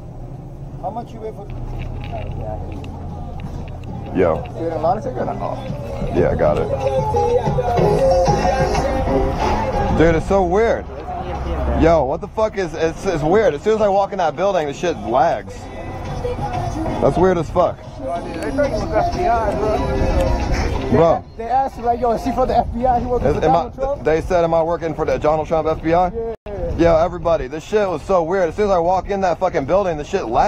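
Nothing here catches the ear as a technical problem at any point in the sound.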